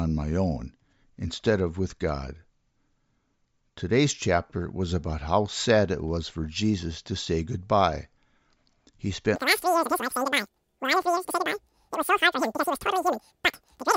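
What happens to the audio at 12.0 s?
At 12.0 s the audio is in a wrong sample rate fault running from 9.36 s to the end. The samples play three times too fast with no conversion, which fits 16 kHz material played at 48 kHz, so the speech races and sits 19 semitones high.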